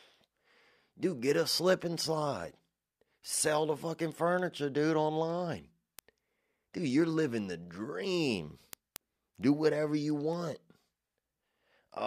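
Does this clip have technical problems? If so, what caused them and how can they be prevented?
Yes. Word clock ticks run from 0.27 to 11.93 s, about five per second. The unlocked receiver drifts roughly 100 ppm from the sender, so one sample slips at each tick. A spectrogram shows evenly spaced thin vertical lines, and the waveform shows tiny single-sample steps. Lock the receiver to the sender's clock.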